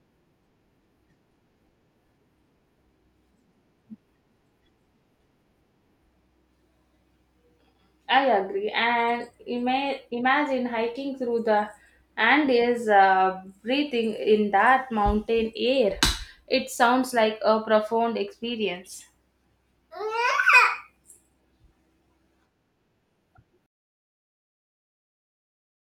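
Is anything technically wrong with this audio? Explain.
No, nothing technically wrong turns up in this speech recording; it all sounds fine as far as faults go.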